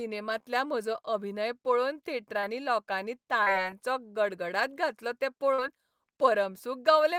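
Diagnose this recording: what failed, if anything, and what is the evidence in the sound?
The network stage dropped audio, causing short concealed packet loss at 2.39–2.46 s, 3.43–3.49 s and 5.54–5.61 s. At each point, about 40 ms went missing and the decoder bridged the gap by extending the preceding sound, heard as a brief smear. A spectrogram shows the extended sound before a crossfade.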